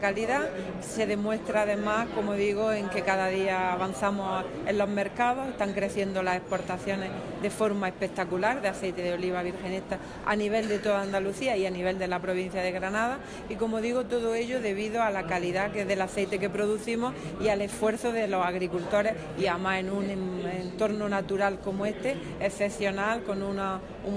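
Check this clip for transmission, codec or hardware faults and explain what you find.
I find no faults in this clip.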